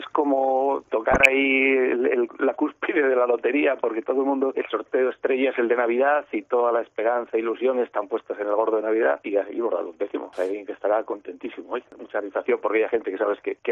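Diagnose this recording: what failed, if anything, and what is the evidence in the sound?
Codec stage: dull, gurgling, granular sound throughout, with upper sub-bands dropping out, is likely MP2 compression at a bitrate around 80 kbps, starving bands of bits.

Transmission stage: DAB burbling at 1.12–1.26 s and again at 13.01 s, with short blips of noise in single sub-bands where bit errors slipped past error correction and corrupted the audio data.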